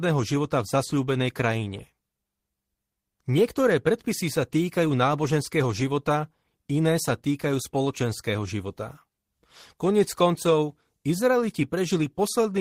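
No technical faults are audible.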